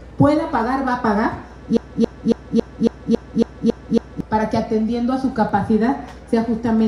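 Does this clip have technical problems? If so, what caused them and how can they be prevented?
Yes. From 1.77 s to 4.21 s the audio sticks in a broken-record loop. A 276 ms fragment plays nine times back to back, identical on every pass, which gives a mechanical stutter of about three to four repeats per second. The likely cause is a player, encoder or stream that stalled and kept resending the last fragment it held, so the audio that belonged in those seconds is missing. To prevent it, detect stalls in the buffer and output silence or flag the gap instead of replaying stale data.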